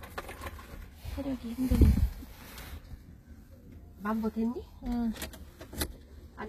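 Throughout, HE-AAC compression is likely: the treble is rebuilt from copied lower bands, sounding gritty and metallic, consistent with about 20 kbps. A spectrogram shows blocky, repeated upper bands ending at 14.9 kHz.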